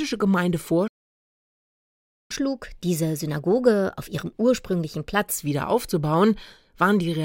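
At 0.87 s the audio halts in a playback stall, leaving about 1.4 s of silence until 2.31 s, likely because the player's buffer ran dry or its thread was blocked. On a waveform this is a flat line cut abruptly mid-signal, and on a spectrogram a fully blank vertical band. From 2.31 to 5.31 s comes catch-up at higher speed. The player runs the backlog at 1.15 times normal rate, lifting pitch by roughly two semitones. Harmonics sit visibly higher on a spectrogram and events crowd closer together until the speed returns to normal at 5.31 s.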